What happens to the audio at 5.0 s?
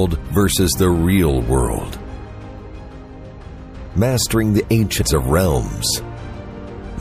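Between 4.98 and 5.02 s, a span of about 44 ms, the sound breaks into a short chirp or blip typical of damaged data in a compressed stream. Part of the encoded stream at that point is corrupt, so the decoder misreads or discards the affected frames, loses frame sync, and scans forward for the next valid header before output resumes. The result is this brief, unnatural glitch.

The surrounding audio at 5.0 s also carries plainly audible MP3 compression damage, a watery, swirling texture with dulled treble, and the encoding likely ran at a rate around 64 kbps. With that few bits, the encoder cuts the high band at a fixed frequency and zeroes weaker spectral lines, which switch on and off from frame to frame, producing the unstable, smeared character heard around the glitch.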